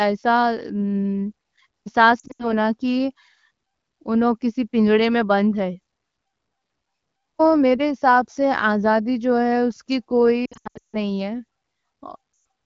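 A speech clip over an AMR wideband link with lost AMR speech frames. At 2.19 to 2.53 s, scattered gaps total 140 ms. Right after "جو ہے اس کی", 10.46 to 10.97 s loses 400 ms, with runs up to 160 ms. Another 120 ms goes at 12.33 to 12.45 s. Each time the decoder repeats the last good sound with falling gain, so the sound dips and fades to near silence within two frames.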